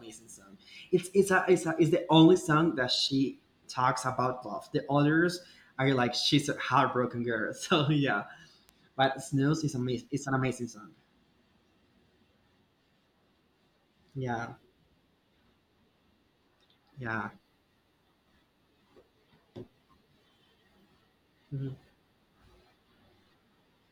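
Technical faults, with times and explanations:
8.69 s, bit error spike: a single sharp tick lasting two samples and peaking at about -30 dBFS. One flipped bit made the sample values jump by a power of two and snap back. The sudden step spreads energy across the whole spectrum, unrelated to the speech.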